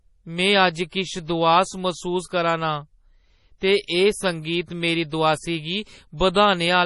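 Throughout the speech, the sound is swirly and watery. Sibilants turn into metallic chirps, and consonant attacks smear. Nothing is heard above 11.5 kHz. This is likely heavy MP3 compression at a low bitrate, around 32 kbps, switching weak frequency lines on and off.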